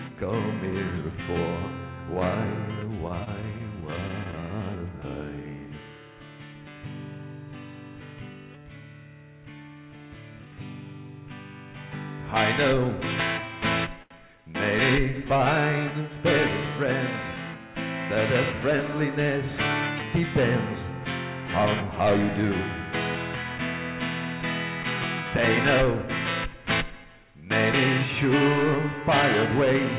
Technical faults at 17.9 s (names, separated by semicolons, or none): none